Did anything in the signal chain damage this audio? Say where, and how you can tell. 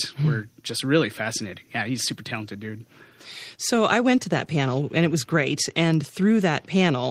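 No, nothing in the signal chain audibly damaged this speech recording. I can't hear anything at any stage, from the wiring to playback, that points to a fault.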